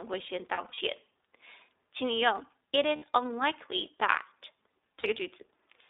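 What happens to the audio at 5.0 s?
At 5.00 s the speech drops out for about 40 ms, until 5.06 s. This is lost iLBC frames. The decoder fills the gap by repeating the last pitch cycle mixed with noise, so it sounds like a brief held, slightly buzzy vowel. Because each frame decodes independently, the voice snaps back almost immediately. The gap length fits two lost 20 ms frames.

Underneath, the whole passage carries the iLBC codec. The band is squeezed to roughly 300 Hz to 3.7 kHz, so the speech sounds thin and telephone-like. The coding damage is plainly audible as a rough, slightly synthetic edge, which fits iLBC at 15.2 kbps.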